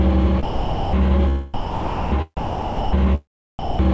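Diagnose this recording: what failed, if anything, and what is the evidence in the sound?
Call processing failed, likely from sound dropped by the voice detector. The sound gives way to steady comfort noise at 0.43–0.93 s, 1.54–2.12 s, 2.37–2.93 s and 3.59–3.79 s. The sender treated it as background and stopped sending. The receiver filled each gap.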